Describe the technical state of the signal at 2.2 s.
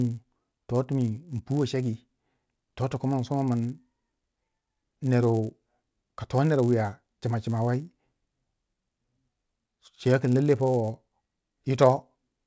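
At 2.2 s the speech carries the fault of a resampler restarted on every block. It runs through the whole clip, not just this moment. The conversion from 48 kHz to 16 kHz was done on each 10 ms block separately. At every block edge the converter lacked the real neighbouring samples. Each edge gets a small error. Repeating every 10 ms, these errors form a 100 Hz buzz. It rides on the speech and drops away in silence.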